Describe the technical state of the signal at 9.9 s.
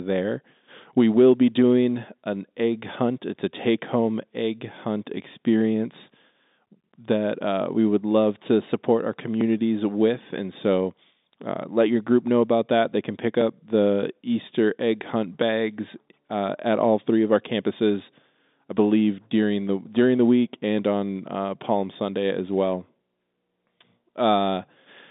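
At 9.9 s the speech sits inside a run of periodic USB or driver dropouts lasting from 5.41 to 15.42 s, starting just after "take home egg hunt". Every 2.0 s something stalls the USB bus or audio driver, and a couple of milliseconds of audio are skipped outright rather than filled. Each gap splices the waveform abruptly, so the loss is heard as a small, evenly spaced tick within the telephone-band sound.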